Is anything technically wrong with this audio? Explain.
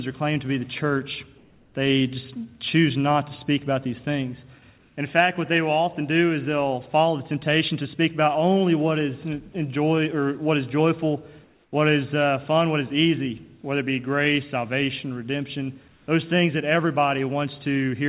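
Yes. Comfort noise in place of the background appears four times: 1.38–1.74 s, 4.78–4.96 s, 11.44–11.72 s and 15.88–16.08 s. In each gap, the real background, which sits about 34 to 41 dB below the loudest passages, gives way to a smooth, featureless hiss. It is about 1 to 3 dB quieter, except at 11.44 s, where the level holds. The likely cause is discontinuous transmission: the sender stops sending when it detects silence, and the receiver fills the pause with synthetic noise roughly matching the background. Everything stays within a band that ends at 4 kHz, which fits a G.711 mu-law call path.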